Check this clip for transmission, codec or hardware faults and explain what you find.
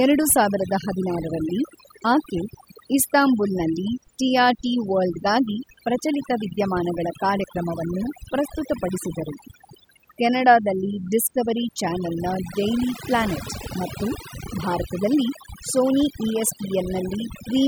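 There's one problem, and it's a processing fault more than a transmission one: overdone noise removal running the whole way through. The denoiser was pushed so hard that bands near its noise estimate get switched off, taking quiet speech detail too. Background drops and breaks up into twinkly specks.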